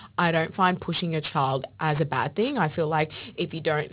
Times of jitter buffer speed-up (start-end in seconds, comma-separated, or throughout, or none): none